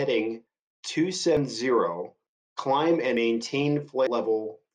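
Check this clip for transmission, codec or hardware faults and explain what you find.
The speech skips abruptly at 1.37, 3.17 and 4.07 s, each jump losing about a tenth of a second with no gap, likely audio missing between 1 s chunks as the recorder switches over.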